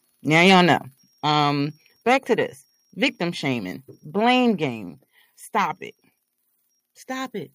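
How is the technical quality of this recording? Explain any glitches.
The recording has a couple of level problems: some harsh clipping early on, and a microphone level that keeps dropping in steps.

From 0.35 to 0.73 s there's a crackly, flattened edge on the loudest bits. That's likely microphone overload: the input was driven about 6 dB past what the converter could take, so about 3 percent of the samples got their tops sheared off. A much smaller instance shows up at 2.10 to 2.14 s, only about 1 dB over.

At 1.02 s the whole sound, background included, suddenly gets quieter by about 5 dB, and there are smaller drops of about 2 dB at 2.04 s and 4.56 s. Those are likely the microphone volume being stepped down by the call software, which notices the input running hot and cuts the device gain in one jump. It fits the timing: the first drop follows that early overload.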